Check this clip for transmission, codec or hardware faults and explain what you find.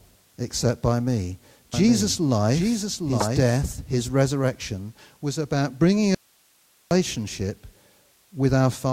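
Three faults turn up in this speech clip: a doubled track, a corrupt frame and a dropout.

From 1.74 to 4.10 s, right after "except by me", there's a doubled audio track. A second full-band copy runs roughly 0.7 s behind the original, about 5 dB quieter, with no room colour, and it cuts in and out abruptly. This is likely a second capture path or an edit leaving two copies out of step. It clears before "resurrection was about bringing".

Around 3.20 to 3.25 s there's a corrupt frame decoded. Flipped bits in one compressed frame got played anyway, so misread gains and codes put energy in the wrong frequency bands for about 40 ms. You hear it as a short glitch sitting on top of the doubled section.

From 6.15 to 6.91 s, just after "resurrection was about bringing", there's an audio dropout to a faint residue. The speech cuts out abruptly for about 0.76 s, leaving only hiss about 40 dB below the signal. 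It's likely the signal was lost upstream while the rest of the path stayed live.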